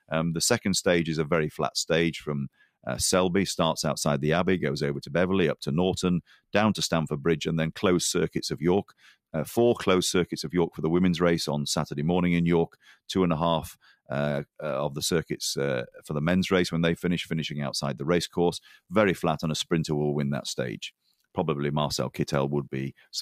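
Sound cut by the noise suppressor occurs at 2.53–2.86 s, 6.25–6.54 s, 8.84–9.15 s, 12.69–12.98 s and 13.74–14.10 s. Each time, the suppressor mistakes wanted sound for noise and pulls it down by about 16 to 21 dB, leaving brief dips in level.

From 18.58 s to the end, the audio turns grainy. Low bit depth without dither is the likely cause, with rounding to roughly 9 bits. The error noise sits around 40 dB below the signal and tracks it, so quieter passages sound gritty.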